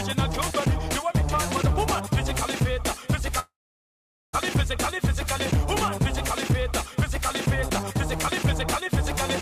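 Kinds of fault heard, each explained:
long network dropout: From 3.39 s the sound smears into a brief fading buzz, then falls silent for about 0.82 s before resuming at 4.35 s with roughly 0.94 s of material missing, likely because packets stopped arriving and the receiver could only conceal the gap.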